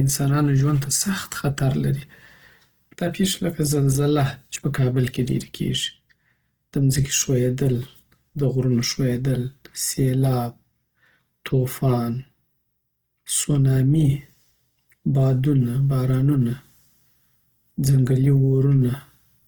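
From start to finish the speech carries plainly audible coding damage, most likely Opus compression at a low bitrate, around 16 kbps. The encoder appears to stay in its full-band music mode, keeping each band's energy and filling starved bands with folded or noise-like content, so the voice turns rough and grainy instead of swirly. Unlike MP3, it has few spectral holes or watery artefacts, and it isn't muffled: content reaches about 20.2 kHz.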